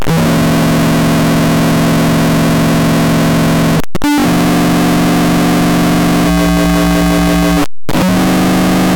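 From the first moment to the end, the music sounds like a float read as integer: everything is slammed to a harsh, buzzy, near-square wall at an almost fixed, high level, so quiet passages and background hiss come out as loud as the main sound. You can still follow the pitch, though. The likely cause is 32-bit float samples being interpreted as 32-bit integers, with the sign and exponent bits dictating the level instead of the actual waveform.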